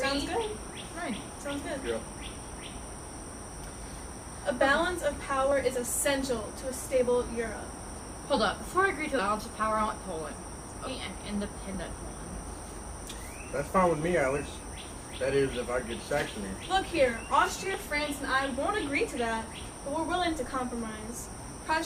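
Compressed frames skipped at 5.51 s: the audio jumps ahead by about 40 ms, roughly two 20 ms frames, because frames were either missing from the file or rejected by the decoder as damaged. The join sounds like a sudden jump in the sound.

Audio missing between chunks is likely behind the skips at 5.76 s, 11.75 s and 17.74 s. They come exactly 6 s apart, and each drops roughly 7 ms as the recorder closes one chunk and opens the next, butting the two sides together.

Compressed frames skipped again at 9.19 s and 10.87 s: these are longer jumps of about 150 ms and about 400 ms, so the sound lurches forward.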